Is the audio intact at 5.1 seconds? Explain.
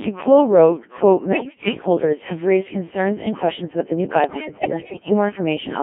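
No. At 5.1 seconds the sound is breaking into bleeps, warbles and robotic gibberish, with sudden jumps in pitch, level and tone colour. This is bit errors on digital voice radio, running from about 4.24 to 5.13 s, just after "questions about the new". Flipped bits, at a rate of roughly 15 percent, are reaching a very low-rate vocoder. There each bit sets the pitch, loudness, voicing or spectrum of a whole frame, so every error reshapes a stretch of the synthetic voice rather than adding a brief click.

Underneath, the speech is robotic and buzzy throughout, confined to a 200 Hz to 3.4 kHz band, with heavy damage from the Codec 2 vocoder at a rate that points to about 1.3 kbit/s. The decoder does not keep the waveform. It rebuilds the voice from sine waves driven only by pitch, voicing, energy and a spectral envelope.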